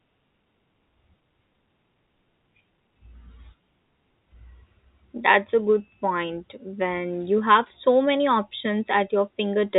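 No technical faults can be heard in this speech, which has passed through G.711 telephone coding at the usual 64 kbps.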